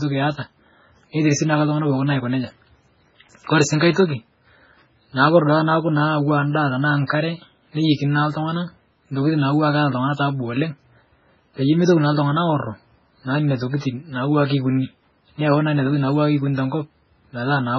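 From start to finish the speech has that watery, swirly quality, with nothing above 7.5 kHz, so the top end just stops dead. That's the signature of heavy MP3 compression, likely at a very low bitrate, something in the region of 16 kbps. The encoder runs short of bits, lops off the treble at a fixed point and drops the quieter frequency lines, which flicker in and out between frames. That's what gives the s sounds their metallic chirp and softens the onsets.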